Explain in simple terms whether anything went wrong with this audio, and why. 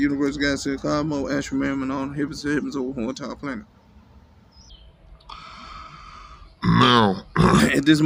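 From 4.70 to 7.60 s the audio drops deep and sluggish, playing at about 0.72 times normal speed, roughly five semitones lower: a section at the wrong speed, likely from playback on a mismatched clock.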